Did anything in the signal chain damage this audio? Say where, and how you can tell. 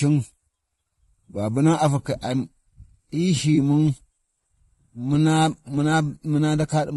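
Yes. Throughout the speech, a rough, grainy texture with noise between the harmonics and a thin, synthetic top band is likely from low-delay AAC compression (AAC-ELD), consistent with roughly 32 kbps. The damage is spread evenly, unlike a network dropout.

At 3.55 to 3.58 s, a brief smeared, phasey patch is AAC frame loss with concealment. About 20 ms of audio is rebuilt from the preceding spectrum, so the gap is filled rather than clicking or going silent.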